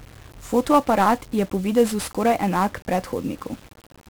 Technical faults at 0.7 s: 1-bit DFPWM compression

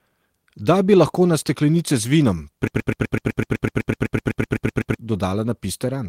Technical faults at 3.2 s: broken-record loop

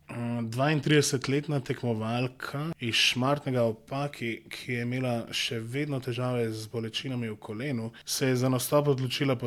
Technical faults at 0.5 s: none

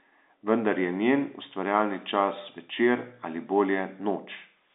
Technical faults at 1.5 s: none

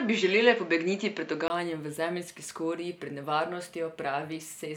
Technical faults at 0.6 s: input switched to a poorer device

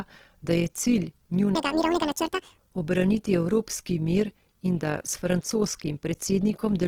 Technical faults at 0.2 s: overlap-add ripple; Opus compression

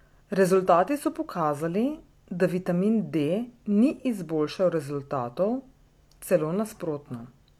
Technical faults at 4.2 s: none

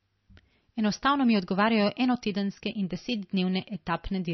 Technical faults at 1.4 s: MP3 compression

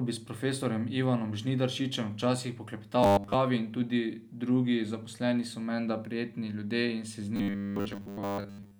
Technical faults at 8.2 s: robotic sound from repeated short buffers

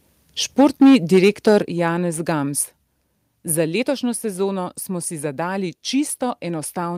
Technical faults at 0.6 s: microphone overload; microphone volume stepped down

